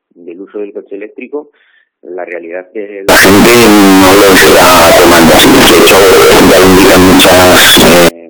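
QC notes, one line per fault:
3.09 to 8.09 s, float read as integer: the sound suddenly turns into a harsh, very loud, nearly square wave sitting at an almost fixed, high level, with the quiet background blown up to match. It likely comes from 32-bit float samples being read as 32-bit integers, so sign and exponent bits dominate.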